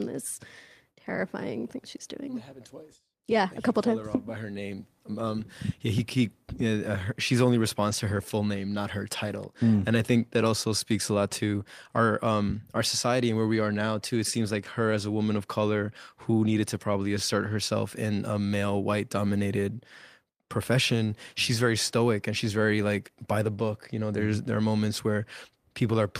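A speech clip with one brief patch of roughness from 7.87 to 7.93 s, between "her she's only" and "to her full name": for about 40 ms the sound turns grainier and noisier, yet nothing drops out. This is a lost packet rebuilt from error correction. The span fits two lost packets whose contents the decoder replaced with the low-bitrate backup copies carried in the following packets, filling the hole at reduced quality rather than leaving silence.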